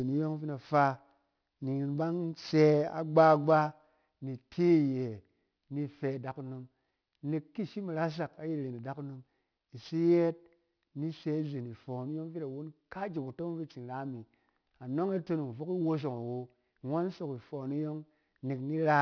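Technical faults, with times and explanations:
Throughout, aliasing. The speech was resampled down without a proper low-pass filter first. The spectrum runs hard up to a band edge at 5.5 kHz, which fits a new rate of about 11 kHz. Everything the original carried above that edge folds back below it at unrelated pitches, roughly 25 dB under the speech. Sibilants lose their natural hiss and come out gritty and metallic. An inharmonic rasp rides along with the voice.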